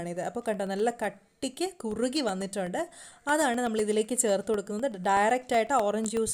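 There's a steady train of ticks running through the audio from about 0.17 s to 6.17 s, one every 0.125 s, so eight a second and around fifty in total. That's the classic signature of periodic USB or driver dropouts: something on the system is stalling the USB bus or audio driver on a fixed schedule, and each time a tiny slice of signal, roughly half a millisecond, gets replaced by silence, leaving a click wherever there's sound.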